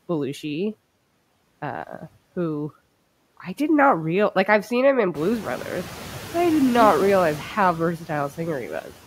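Throughout the recording, the noise suppressor is cutting the bands it judges to be steady background by about 12 dB, re-deciding every frame. The result is noise suppressor artifacts: the noise dips in the gaps between phrases and swells back up beneath the speech.

Around 5 s, just after "I've seen him in", the room noise jumps by about 17 dB, settling roughly 18 dB below the speech. The suppressor's noise estimate is still based on the quieter background, so from 5.15 s it catches only about 5 dB of the louder noise. The noise suppressor catching up is audible as a burst of fuller background that gradually drains away as the estimate adapts, over about 2.3 s, until 7.43 s.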